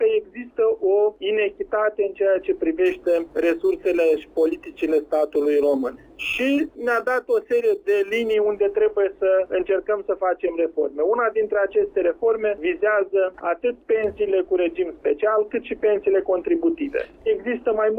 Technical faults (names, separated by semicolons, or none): crude rate conversion